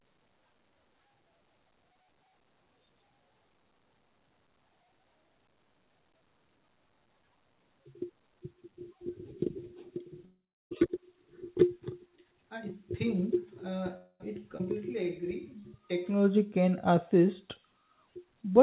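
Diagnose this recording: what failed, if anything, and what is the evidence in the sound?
Network stage, call audio freeze: packets were likely held up in transit, so the jitter buffer ran dry twice. At 10.25 to 10.72 s the receiver stretches the last sound into a fading buzz that dies to silence for about 0.32 s, inserting roughly 0.46 s of filler. At 13.97 to 14.21 s the same happens for 0.23 s, with only 0.06 s of silence. In both cases the speech resumes where it stopped, with nothing lost.

Network and buffer stage, skip ahead: a stretch of speech was discarded while later audio was already queued, either on the way or by the buffer when it overflowed. At 14.58 to 14.61 s playback jumps forward, bridging the cut with only about 17 ms of joining material, and around a third of a second of speech is simply gone. The two sides meet almost directly, so the jump is abrupt.

Buffer stage, jitter buffer slow-down: with its reserve running low, the receiver repeated individual pitch periods and fragments of pauses many times over to rebuild depth. 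From 14.72 to 16.21 s the speech plays at about 90% speed with pitch unchanged, adding 163 ms in total, so sounds are drawn out.

Buffer stage, jitter buffer speed-up: the buffer then overshot its target and trimmed short pitch-period slices in quick succession to cut the delay back. From 16.28 to 16.97 s the speech runs at about 108% speed at the same pitch, removing about 70 ms, and sounds hurried. The call path itself carries nothing above 4 kHz, which fits G.711 A-law at 64 kbps.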